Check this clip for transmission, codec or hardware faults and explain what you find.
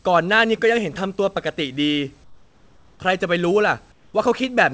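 Two short pauses in the speech have their background replaced by comfort noise; the band stops near 8 kHz, as expected on a wideband call codec path. From 2.24 to 3.00 s and again from 3.92 to 4.14 s, the room's natural background gives way to a smooth, featureless hiss, about 3 dB and about 4 dB quieter respectively. Likely cause: discontinuous transmission, where the sender goes quiet during pauses and the receiver synthesises noise that only approximates the real background.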